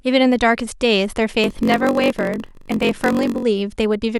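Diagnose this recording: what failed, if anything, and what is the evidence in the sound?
A block size mismatch (padded) at the driver or buffer stage affects the speech from 1.42 to 3.44 s. Across that span a steady buzz sits under the speech at about 46.9 Hz, and delivery slows to 0.938 of normal speed while the timbre stays. Each block the next stage reads, which fits a 1024-sample read, gets only part of its length filled with real audio and the remainder padded with zeros. Those regular silent gaps produce the buzz and stretch the timing.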